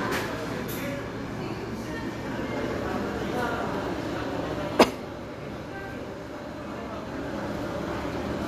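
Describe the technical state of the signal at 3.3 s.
At 3.3 s the signal is intact, with no dropout, clipping, glitch or other fault to be heard at that moment.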